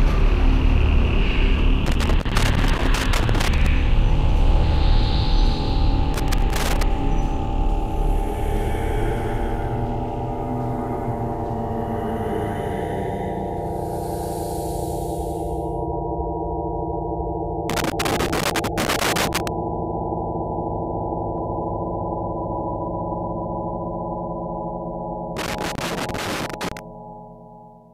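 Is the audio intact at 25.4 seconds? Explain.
No, 25.4 seconds falls right inside a burst of loose connector crackle that runs from about 25.37 to 26.79 s, so roughly a second and a half. What you're hearing is a worn or dirty contact somewhere in the chain making and breaking as it shifts, chopping the sound on and off in quick, uneven bursts, with little pops where any DC on the line jumps in. The result is that irregular scratchy crackle over the sound.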